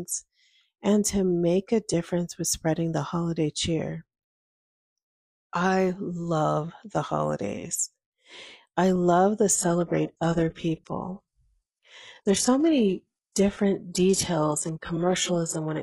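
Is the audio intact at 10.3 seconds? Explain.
No. At 10.3 seconds the speech is in a stretch of adaptive stream at a lower bitrate. It runs from 9.55 s to the end at 15.82 s. The connection slowed, so the player swapped versions without a gap. The sound points to a move from 96 kbit/s AAC-LC to 12 kbit/s HE-AAC. Quality drops suddenly. Nothing is left above 11.5 kHz, so the treble sounds dull, and codec artefacts rise.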